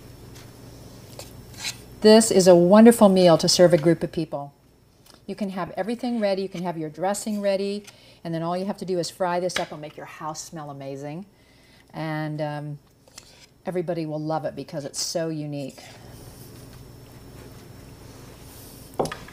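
Lost LE Audio frames at 5.67 s: a gap of about 7.5 ms, which fits a single dropped Bluetooth LE Audio frame. The LC3 decoder filled it by repeating the spectrum of the previous frame with its phase signs randomized. The result is a brief rough, noisy patch in place of the original sound. The loss is short enough that the stand-in audio never fades, so it registers as a tiny grainy blip rather than a dropout.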